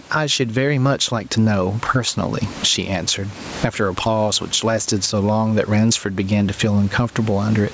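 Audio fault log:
throughout gain pumping: gain swings about 20 dB, pulled down on each loud sound; likely a fast limiter on overhigh mic gain, not a gate, which silences gaps.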